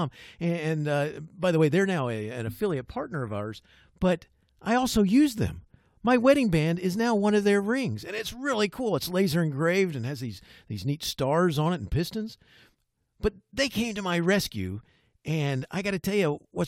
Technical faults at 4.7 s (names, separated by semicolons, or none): none